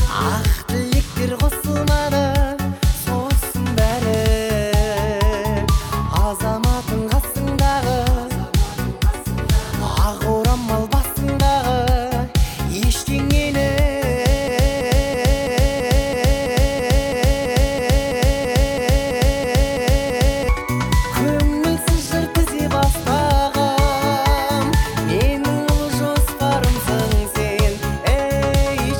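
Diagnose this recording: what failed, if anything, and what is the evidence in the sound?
Broken-record loop, 14.48 to 20.49 s: a 0.33 s fragment repeats identically 18 times back to back, replacing the audio that belonged there. The likely cause is a stalled playback or stream buffer resending its last block. Unlike an echo, the repeats never fade.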